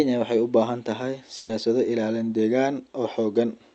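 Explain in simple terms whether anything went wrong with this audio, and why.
A burst of packet loss hits at about 1.37 to 1.51 s, right after "waxay u baahan tahay". During the call, a run of audio packets went missing, about 120 ms of speech in all. The receiving end covered the hole by stretching out the last sound it had and letting it fade, so you hear a brief held sound that dies away. The speech then picks up slightly further along, with that short piece gone for good.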